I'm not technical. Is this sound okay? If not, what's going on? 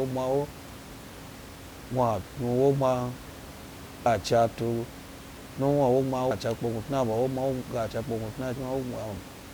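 No. The speech skips three times, at 1.81, 4.06 and 6.31 seconds. Each time, about a third of a second of sound vanishes and the two sides are joined with no gap. This is likely audio missing between chunks, where the recording is handled in pieces of about 2.5 seconds and a bit is lost at each hand-over. The quiet room noise underneath is just part of the recording.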